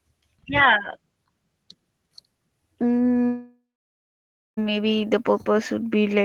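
At 3.25 s the speech breaks into a fading buzz, then sits near-silent for roughly 0.95 s before resuming at 4.59 s, about 1.3 s of material gone. That's likely a long network dropout, with the receiver stretching the last sound until it gave out.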